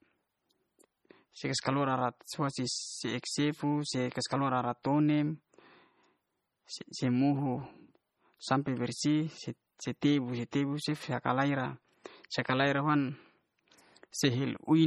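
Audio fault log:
Throughout, MP3 compression: the speech was likely squeezed through an MP3 encoder starved of bits, and the heavy damage fits a bitrate around 32 kbps. With so few bits, weak frequency lines are dropped and return from frame to frame, so the speech sounds watery and swirly, s sounds turn metallic and chirpy, and consonant attacks smear. Content still extends up to about 21 kHz, so the damage lies in the thinned detail rather than in a lowered treble ceiling.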